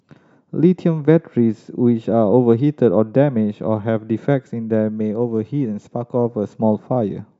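Nothing in the recording stood out as a technical problem on listening.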